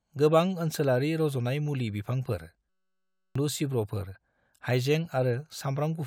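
Speech clip with a system hang loop from 2.69 to 3.36 s. A 5.33 ms fragment repeats over a hundred times, giving a steady 188 Hz buzz, which fits a 256-sample buffer. Roughly 0.7 s of speech is lost.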